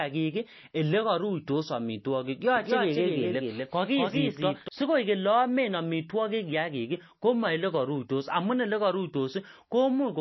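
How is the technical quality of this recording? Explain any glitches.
The quality is poor. Heavy coding damage runs through the whole clip, and a doubled copy intrudes briefly.

Throughout, the sound has nothing above 5.8 kHz and a watery, swirling texture. This is likely MP3 compression at a very low bitrate, around 25 kbps. Short of bits, the encoder cut the treble and let weak frequency lines flicker between frames.

From 2.56 to 4.68 s, a second copy of the speech trails the first by about a fifth of a second, a few dB quieter. This doubled audio track has no room decay. It starts and stops abruptly, likely from a second, slower capture path mixed in.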